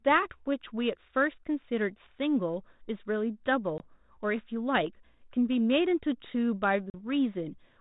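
At 3.78 to 3.84 s and 6.90 to 6.95 s there is packet loss on an ADPCM call, about one and then two packets' worth of audio, or 20 ms and 40 ms, replaced by silence. The G.726 ADPCM path, whose band-limited sound fits 32 kbit/s, then restarts with its predictor out of step, so the speech re-enters slightly distorted before settling.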